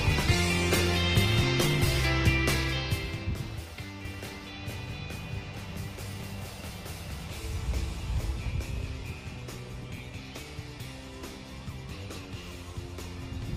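An adaptive stream began on a low-quality version so playback could start quickly, and for the first 2.0 s the audio has a missing or artificial-sounding top end and heavier codec smearing, consistent with a low-rate Opus stream of around 16 kbit/s. At 2.0 s the player switches to a better version, plausibly around 64 kbit/s, and the treble and clarity return at once with no gap or dropout. From 4.05 s to 8.51 s the audio is a doubled audio track: the same full-band sound is mixed in a second time, running about half a second behind the original and roughly 5 dB quieter. The late copy is dry, with no decay or room colour, so it sounds like a distinct repeat rather than an echo, and it starts and stops abruptly at those two points. The likely cause is the same audio being captured again through a slower path, or an edit that kept two out-of-step copies.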